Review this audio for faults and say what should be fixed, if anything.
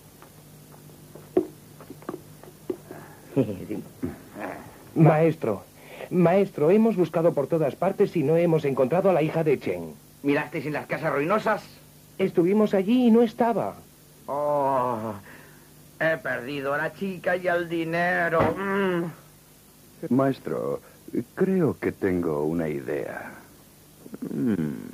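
Nothing stood out on listening, so there is nothing here that needs fixing.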